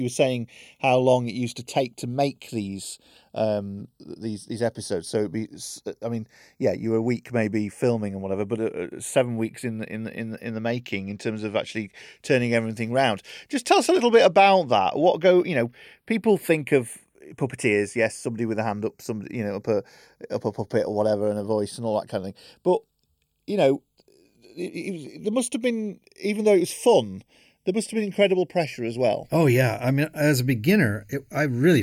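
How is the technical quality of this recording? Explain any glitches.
The speech has a slow, sweeping flanging colour running through the whole recording. The cause is channels drifting apart: the two sides were captured on separately clocked devices, roughly 30 ppm apart, so the delay between them creeps up to about half a millisecond. Summed to mono, the comb notches glide steadily through the spectrum.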